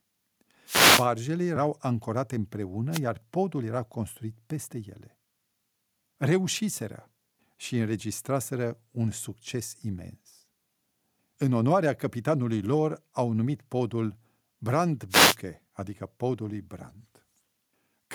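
Wireless microphone noise hits occur at 0.66 to 1.07 s, 2.91 to 3.00 s and 15.10 to 15.36 s: the FM radio link fades as reflected paths cancel, receiver noise rises, and each dropout sounds like a brief static swish over the speech.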